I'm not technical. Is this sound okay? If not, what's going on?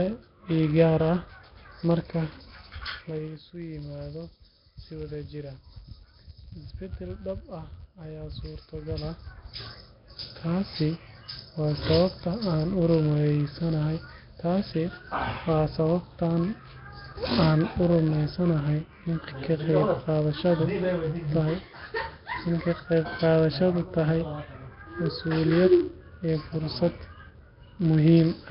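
No, there are a few problems. The most constant one is a block size mismatch (padded): one stage of the audio chain hands over chunks of sound that are too short, and the gaps get filled with silence. That produces a steady buzz at about 91.5 Hz under the speech, and everything plays very slightly slow while the timbre stays the same.

The speech also sounds rough and hissy, a bit underwater, with nothing above about 5.3 kHz. That's heavy codec damage, most likely from Nellymoser compression, an old Flash-era microphone codec that saves space by leaving quiet parts of the sound out and filling them with noise.

Finally, there's zipper noise twice. From 2.97 to 3.41 s the volume drops in small jumps, about ten a second, and each jump makes a tiny click. From 8.72 to 9.80 s it climbs back up the same way, with slower steps, about five a second.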